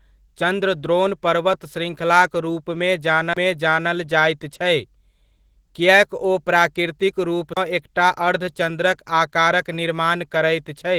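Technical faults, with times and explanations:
Throughout, Opus voice compression: speech coded at 16 kbps in hybrid mode sounds hoarse and slightly robotic from coarse excitation, unlike a clean band-limit with no grain.
3.33 s and 7.53 s, CD skip: a brief mute of about 30 ms, after "चंद्रद्रोण पर्वत श्रृङ्खलाक" and before "एकटा अर्धचन्द्रक आकारक निर्माण", then playback resumes from a different place, unlike a dropout that resumes in step.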